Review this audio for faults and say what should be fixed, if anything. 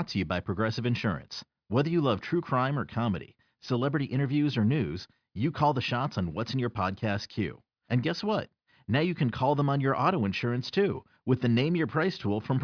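No faults found; nothing needs fixing.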